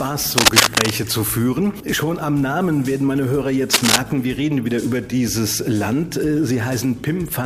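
A buzz at about 43.1 Hz runs through the whole clip. This is a block size mismatch, in the truncated form. One stage writes blocks longer than the next stage reads, and the tail of each block is dropped. Each cut repeats at the block rate, which fits 1024-sample blocks. So little is lost per block that the speed stays at 1.0 times, and the pitch is unchanged.

From 0.38 to 0.91 s, dense rustling noise sits over the sound. It comes again from 3.73 to 3.98 s. Both bursts are uneven and a little louder than the sound beneath them. This is cable scratch noise. Its likely cause is a worn cable, connector or control being moved. The contact resistance jumps about quickly, and the signal picks up ragged scratching while the part is disturbed.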